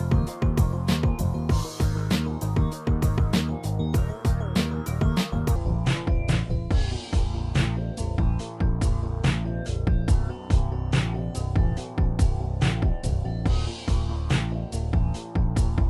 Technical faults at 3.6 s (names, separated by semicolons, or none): none